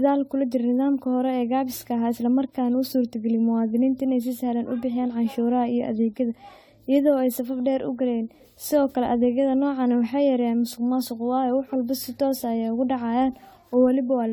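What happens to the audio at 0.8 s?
At 0.8 s the speech carries generation loss, present from start to finish rather than at that moment alone. It likely comes from repeated AAC-LC coding, around five passes, with the sound pointing to roughly 64 kbit/s each time. Every re-encode quantises on a shifted frame grid, so noise and spectral holes pile up into a swirly, hollow smear with blurred onsets. A single encode at that rate would not sound this damaged, and the band still reaches 20 kHz.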